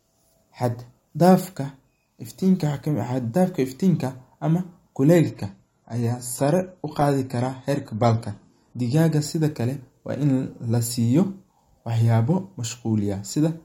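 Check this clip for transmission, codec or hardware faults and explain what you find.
One fault: from 5.16 s to 9.16 s the adaptive stream switched to a lower bitrate when the connection slowed, changing abruptly with no gap. The speech picks up codec artefacts, which fits a drop from roughly 96 to 32 kbit/s AAC.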